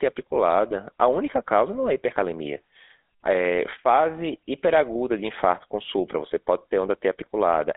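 From start to finish the speech runs through a GSM full-rate codec, squeezed into roughly 300 Hz to 3.6 kHz with an obvious buzzy, gravelly roughness that fits 13 kbps coding.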